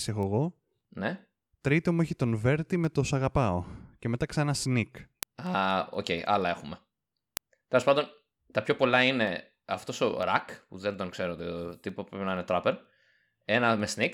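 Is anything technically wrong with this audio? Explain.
Yes. Word clock ticks run from 0.23 to 14.04 s. The receiving device's clock isn't locked to the sender's, drifting by roughly 100 ppm, so a single sample slips about every fifth of a second, producing around fifty sharp, uneven ticks over the speech.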